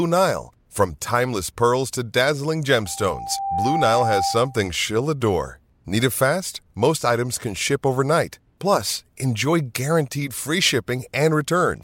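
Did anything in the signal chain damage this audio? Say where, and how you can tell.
Yes. The damage happens in the acoustic loop ahead of the converter, where a microphone hears its own loudspeaker. This is loudspeaker feedback squeal. Just after "timeless pearls to dazzling", at 2.85 s, a steady tone near 787 Hz appears. It swells over roughly three quarters of a second and peaks at about 5 dB above the speech. It holds until 4.73 s, just before "she'll adore". At that pitch the loop gain topped one, so the tone fed itself.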